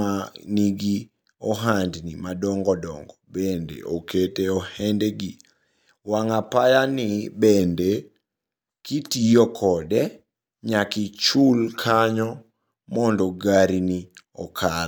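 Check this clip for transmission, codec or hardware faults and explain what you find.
Three drift correction steps occur in the speech: 3.54–4.27 s (right after "madongo dongo"), 7.60–8.57 s, and 11.35–12.84 s (ending just before "mondo gari ni"). Each time, playback slows by about 6.2% and pitch drops 110 cents, a little over a semitone, then snaps back. A clock-matching stage likely stepped its rate to rebalance its buffer. On a spectrogram, the harmonic stack shifts down abruptly and jumps back up at the boundaries. The waveform looks slightly stretched.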